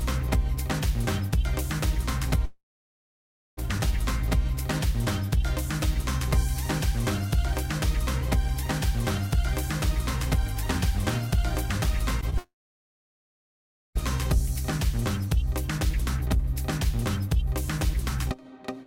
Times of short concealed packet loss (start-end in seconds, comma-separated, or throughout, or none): 12.21-12.34